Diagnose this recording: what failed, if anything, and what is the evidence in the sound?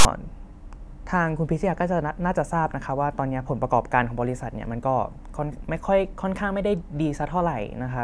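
A harsh, loud rasp with hard edges opens the speech clip from 0.00 to 0.05 s, lopsided rather than centred on silence. This is file tags played as audio: a block of text metadata was decoded as samples at storage/playback, its character bytes forming a skewed waveform.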